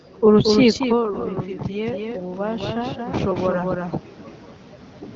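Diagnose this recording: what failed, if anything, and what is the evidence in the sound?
A doubled audio track runs through the whole recording. This is a call-processing or capture fault. A second full-band copy of the speech trails the original by roughly a fifth of a second, at about 5 dB lower. It has no reverberant tail. Most likely a slower second capture path is being mixed back in.

Automatic gain rising occurs in call processing from 0.39 to 3.97 s. The talker moves away around 0.5 s, and the input drops by about 13 dB. The gain control then climbs about 7 dB over several seconds. Speech and room noise swell together.

AMR bit errors hit the network link from 1.08 to 1.30 s. For that stretch the speech keeps its pitch and level. It turns hoarse, scratchy and gargly. The duration fits about eleven 20 ms frames with flipped low-priority bits. The AMR-WB decoder then misplaces its excitation pulses and fine parameters.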